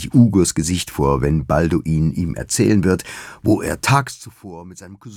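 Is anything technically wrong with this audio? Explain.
Yes. Zipper noise, 3.93 to 4.35 s: the level drops by roughly 20 dB in unsmoothed 1 dB steps, about fifty per second. Each abrupt jump leaves a tiny click, so a fine ticking buzz rides on the sound while it falls.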